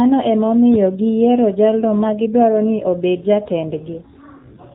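AMR narrowband mobile codec damage runs throughout the speech. The audio was squeezed to an 8 kHz sample rate, so nothing above 4 kHz survives. A coarse vocal-tract model plainly buzzes and sounds synthetic, which fits a low 7.4 kbps mode.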